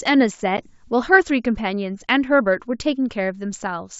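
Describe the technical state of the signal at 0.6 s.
Packet loss on an ADPCM call affects the speech from 0.57 to 0.60 s. About one packet, 10 ms, drops out as a hard-edged silent gap. The decoder's predictor and step size then lag the sender's. The speech returns with brief, slight distortion before settling.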